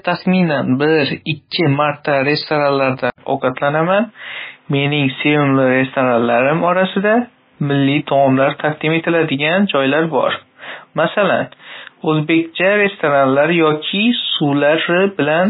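From the start, the speech carries MP3 compression damage, and it is heavy. Nothing comes through above 5 kHz. The sound is watery and swirly, with weak detail flickering in and out between frames. Attacks smear, and s sounds chirp metallically. The likely cause is an encoder starved of bits, which fits a rate near 18 kbps. It drops quiet frequency lines and cuts the treble at a fixed point.

At 3.1 s the input switched to a poorer device. An 80 ms silence marks the change. From there to the end, nothing passes above 3.8 kHz, so the band is narrower than before. A new background noise appears, roughly 40 dB below the speech. The overall level stays about the same. The likely cause is the system moving mid-recording to another microphone or a headset's call profile, with its own tone and noise.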